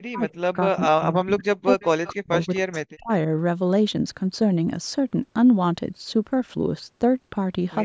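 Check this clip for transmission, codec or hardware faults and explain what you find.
Two faults are audible in this speech, both pointing to the echo canceller on a hands-free call. The top end stops at 8 kHz, which is the call's normal microphone processing.

Speech suppressed in double talk, 0.04 to 3.1 s: the speech dips and breaks up for around two seconds in total, falling by as much as about 40 dB. This is likely the echo canceller mistaking overlapping talk for loudspeaker echo and turning everything down together.

Echo leak, 1.8 to 1.87 s and 2.05 to 2.09 s: two short scraps of the voice return 259 ms late, about 20 dB and then about 25 dB below the speech. The likely cause is a far-end loudspeaker whose canceller let residual pickup through.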